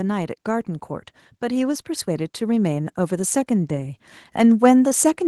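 From 1.48 s to the end, the automatic gain control judged the input too quiet and steadily raised its gain, an automatic gain rising fault. Voice and background noise swell together, growing louder over several seconds rather than holding a steady level.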